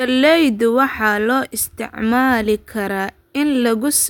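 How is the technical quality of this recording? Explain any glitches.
Good technical quality: no audible glitches anywhere in the recording, so there is nothing to explain.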